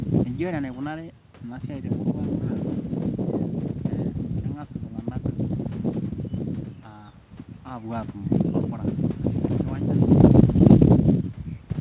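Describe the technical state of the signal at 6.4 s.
At 6.4 s the speech passes through intact, with no dropout, glitch or distortion, only the narrow band of the G.711 call path, which carries nothing above about 4 kHz, and the room noise behind it.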